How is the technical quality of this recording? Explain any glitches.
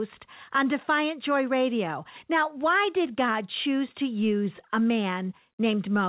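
No glitches to report: the speech comes through a telephone-band call path with nothing above 4 kHz, consistent with G.711 mu-law at 64 kbps, and that band limit is the codec doing its job rather than a defect.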